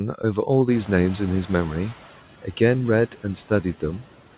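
Noise suppressor artifacts run through the whole speech clip. The suppressor lowers the bands it judges to be steady noise, frame by frame, by about 11 dB. So the background dips in the gaps and comes back under the speech. Nothing reaches above 4 kHz, which fits a G.711 mu-law call path at 64 kbps.

Just after the room noise jumps by about 24 dB, around half a second in, the noise suppressor is catching up. From 0.71 s to 1.96 s its noise estimate lags behind the new level. The louder noise passes through with only about 7 dB of reduction at first. Over those 1.25 s the estimate adapts, and the noise gradually sinks down to the deeper cut heard elsewhere.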